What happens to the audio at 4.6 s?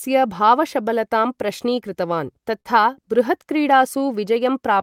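Repeated timing corrections are still under way at 4.6 s, part of a run from 0.09 to 4.79 s. The receiver keeps repeating tiny slices to stay in step, pulling the pace to 98% speed and adding about 70 ms overall, heard, if at all, as faint hiccups and a slightly dragging tempo.

The cause is clock drift between sender and receiver, present throughout the clip. The sender's clock runs roughly 3% slow, so the jitter buffer keeps draining. Each refill is a small, unevenly spaced edit.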